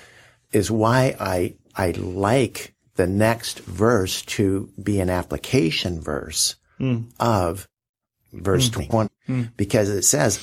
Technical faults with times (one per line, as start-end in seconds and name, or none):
8.76-9.08 frames out of order